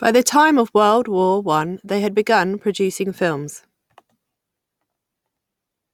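Nothing in this speech recording stood out as a problem on listening.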